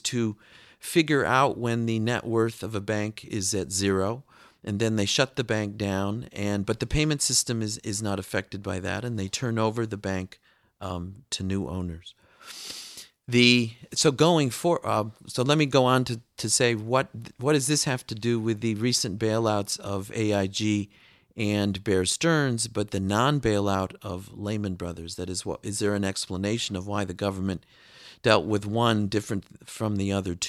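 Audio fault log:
Nothing to log here, as the speech comes across with no faults to report.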